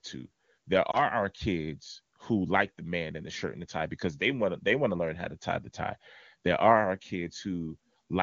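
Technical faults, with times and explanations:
0.91 to 1.03 s, lost AMR speech frames: One 20 ms frame was lost. The decoder repeated the previous pitch and tract settings at reduced gain. A brief warble comes just before "our kids who like".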